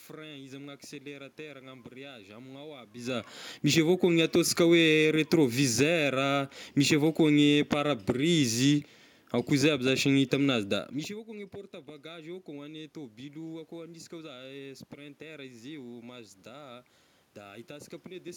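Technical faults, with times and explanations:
No technical faults are audible anywhere in this recording.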